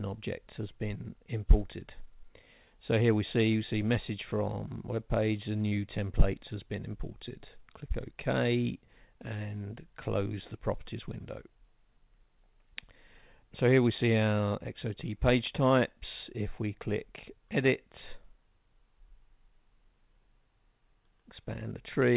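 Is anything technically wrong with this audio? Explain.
Yes. Short concealed packet loss occurs at 5.68 to 5.72 s (about 30 ms) and again at 7.29 s (about 10 ms). Audio never reached the decoder in time, so the receiver extended the preceding sound and blended back. Each spot is a brief smear or wobble, not the silent gap or hard click of a plain dropout. The call path's narrowband sound, with nothing above 4 kHz, fits G.711 mu-law at 64 kbps.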